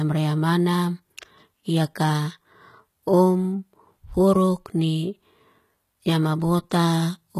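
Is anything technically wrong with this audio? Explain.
Yes. Throughout the speech, the s sounds come out gritty and lispy, with a metallic sheen, and nothing sits above about 14.9 kHz. That's likely HE-AAC compression, at a rate that fits something very low, around 20 kbps. The codec only properly codes the lower spectrum and fakes the treble by copying lower bands upward, so those upper harmonics don't line up with the real ones.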